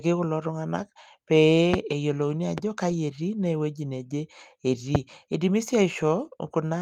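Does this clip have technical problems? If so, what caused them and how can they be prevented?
Yes. Three loud pops cut sharply through the speech at 1.74–1.76 s, 2.58–2.60 s and 4.95–4.98 s, the first and last roughly 20 dB above it, the middle one softer. They are likely voltage spikes from a plug, switch, static or driver glitch. Secure connections and ground the equipment to prevent them.

From 2.89 to 2.95 s the speech turns briefly rough and noisy with no gap: about 40 ms was a lost packet rebuilt from error correction, consistent with two lost packets replaced by low-bitrate copies. A more stable network connection would prevent this.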